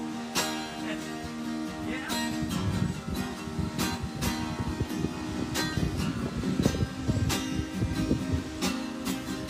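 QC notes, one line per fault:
4.90 s and 7.94 s, dropped buffer (overrun): the sound jumps ahead by a few milliseconds with no gap, likely because samples were overwritten before being read. The waveform shows an abrupt step at each splice, and the spectrogram shows a thin broadband vertical line.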